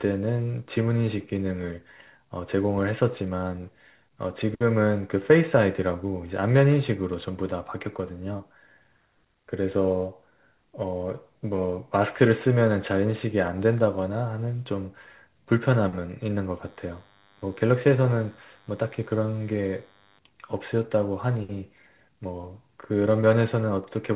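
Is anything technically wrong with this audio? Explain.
Yes, there are two faults in this speech.

From 8.38 to 8.42 s there is a brief smear, a short wobble where the speech seems to stretch rather than move on. This is short concealed packet loss: about 20 ms of the call arrived too late, and the receiver filled the gap by extending the preceding sound before blending back into the real signal.

From 16.64 to 20.19 s a thin, steady buzz with a harsh edge of harmonics sits under the speech, well below it in level. It is DECT cordless phone buzz: a nearby DECT handset or base transmits a radio burst every 10 ms, the audio circuitry rectifies it, and the result is a 100 Hz tone rich in harmonics. The buzz carries through the call path, whose narrow band, with nothing above 4 kHz, fits G.711 telephony coding.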